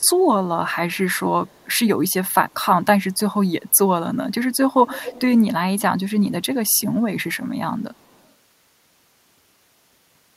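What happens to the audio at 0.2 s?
A very faint delayed copy of the speech, trailing by 225 ms, is heard from 0.0 to 0.22 s: an echo leak, likely from a loudspeaker-side echo canceller letting residual pickup through.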